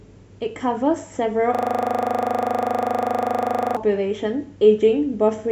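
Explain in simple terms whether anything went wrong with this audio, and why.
A system hang loop runs from 1.55 to 3.77 s: the computer froze, so the audio hardware replayed one 40 ms scrap over and over, giving a buzz repeating 25 times per second.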